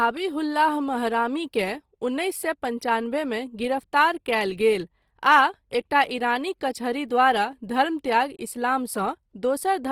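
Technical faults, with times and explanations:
Throughout, Opus compression: the speech was likely squeezed through Opus in its music mode at a low rate, around 24 kbps. Starved bands get filled with folded or noise-like content, so the speech turns rough, grainy and hissy rather than swirly, while keeping full bandwidth.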